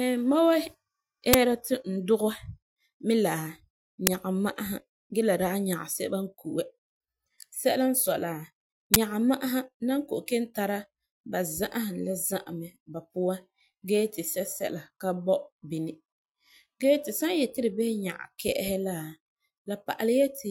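Three short bursts of digital noise cut through the speech, each an uninitialised buffer fault. A block was played before any audio was written to it, so leftover memory came out as samples. The first hits at 1.33 s, just before "ti n dugɛ", and fits a 512-sample block. The second, at 4.07 s before "nyaga ma'asa gee la", fits 256 samples. The third runs from 8.94 to 8.96 s, before "nyaga ma'asa na", and fits 1024 samples.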